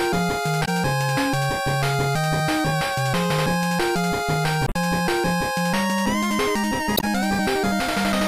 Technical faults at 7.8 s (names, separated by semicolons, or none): none